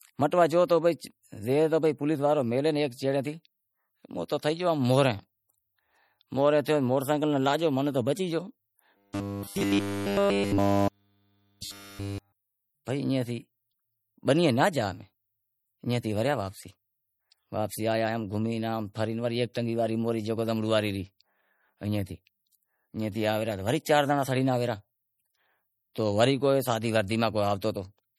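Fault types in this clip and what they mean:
Low-bitrate audio saved at a high bitrate: The speech carries the smeary, swirly artefacts of a heavily squeezed MP3, likely a 48 kbit/s-class encode later re-saved at something like 256 kbit/s. The bigger file can't restore what was lost, and nothing reaches above 19.9 kHz.
Robotic sound from repeated short buffers: From 8.97 to 12.69 s the speech turns into a rigid metallic buzz at 100 Hz, which fits a tiny 10 ms chunk being looped to fill gaps, likely from audio arriving too seldom. It's repeating pretty much the whole stretch, while the real audio in between gets skipped.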